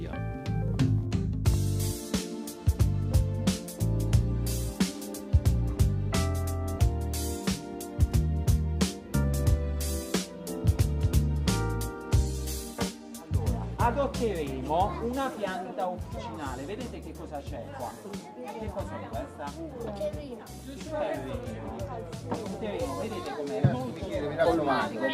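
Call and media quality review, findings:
Nothing wrong turned up on this one; the audio sounds fine the whole way and there's nothing to chase.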